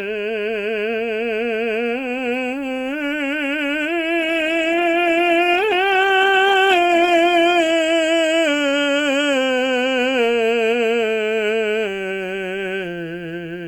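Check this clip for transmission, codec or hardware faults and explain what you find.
One transmission fault is present: a call bitrate drop from 4.23 s to 8.80 s. The music loses its high-frequency content and turns coarse and watery, at its worst for about 3.2 s, then regains clarity as the rate climbs back. The character of the degradation fits the encoder falling from roughly 48 kbps to around 14 kbps after the call's bandwidth estimate fell. At that rate the codec quantises more coarsely and discards the top of the spectrum.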